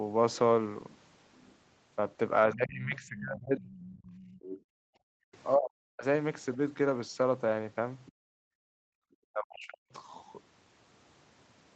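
From 2.53 to 3.64 s the talker's speech sinks by roughly 25 dB over about a second. This is speech suppressed in double talk: with both ends talking, the echo canceller likely could not tell the near voice from loudspeaker echo and turned everything down. Unlike gating, this removes the talker during their own speech, not room sound in a pause.

Right after, from 3.66 to 4.6 s, a second, fainter voice sits some 20 dB under the talker. This is the other side's voice leaking through, likely residual loudspeaker echo the canceller failed to subtract. Unlike the suppression faults, which take sound away, this adds an extra voice.

From 4.6 to 5.27 s the room background drops out by about 40 dB, then returns. This is background gated by the echo canceller, clamping the microphone while the loudspeaker plays. It hits ambience, not the talker's voice.

A brief scrap of leakage at 5.33 to 5.37 s, about 40 dB down, likely has the same echo cause. 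From 5.55 to 6.04 s the talker again drops by roughly 40 dB for half a second, likely another double-talk suppression.

At 8.06 to 8.12 s a short leak, about 30 dB under the speech, likely comes from the same residual echo. The background is gated again from 8.12 to 9.03 s, about 40 dB down. From 9.31 to 9.86 s double talk likely causes a final suppression of roughly 40 dB.

Nothing is heard above 8 kHz, consistent with the call's band-limited Opus path.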